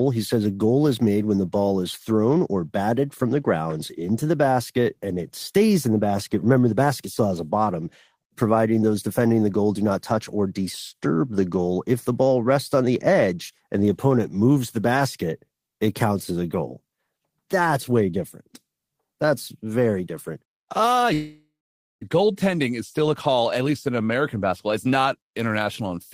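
A long network dropout hits this speech clip from 21.13 to 22.03 s, likely from packets failing to arrive. About 0.88 s of audio is lost; the receiver stretches the last sound into a fading buzz, then roughly half a second of near-silence before speech resumes, skipping the missing part.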